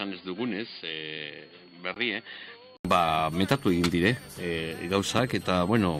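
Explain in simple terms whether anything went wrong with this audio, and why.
A switching power supply whistle runs through the whole clip: a power supply nearby buzzes in an audible mode, adding a faint, high whistle wandering between about 4.1 and 4.6 kHz.

For the first 2.85 seconds the input was likely switched to a poorer device: a poorer device was in use, so the sound is dull, quieter and hissier, with nothing above 4.8 kHz. It clears after a brief 80 ms silence at the switch.

A gap between stream segments occurs at 1.94 s. Two pieces of the stream don't quite line up, so the player inserts about 17 ms of silence, a tiny dropout. No audio is lost.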